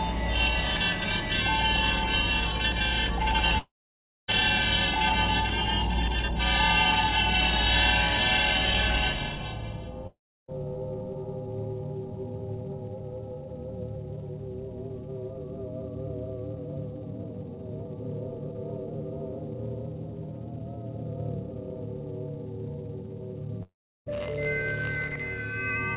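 At 3.58 s the sound breaks off and does not return until 4.30 s. The last moment of audio smears into a fading buzz. Then about 0.58 s of silence follows. The same thing happens from 10.07 to 10.50 s, with 0.3 s of silence. It happens again from 23.63 to 24.08 s, with 0.34 s of silence. Each gap is likely a long network dropout. The receiver stretched the last sound, then went quiet. The audio resumes past the lost part.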